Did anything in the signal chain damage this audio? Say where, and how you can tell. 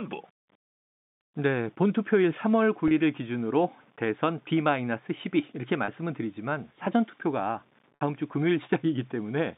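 Yes, at the network stage: packet loss with pitch repetition. The receiver filled 30 ms gaps at 2.88 s and 5.85 s, and a 60 ms gap from 7.95 to 8.01 s, by repeating the last pitch period. The two 30 ms gaps sound like a brief held, buzzy note in the speech; the 60 ms gap fades into silence, and the speech returns with a short cross-fade.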